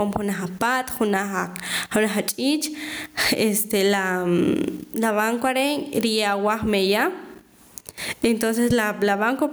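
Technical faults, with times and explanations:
Throughout, gain pumping: the level swings about 25 dB, ducking under loud speech, likely over-high gain into a fast limiter. The waveform is squashed, with loud and soft parts close in level.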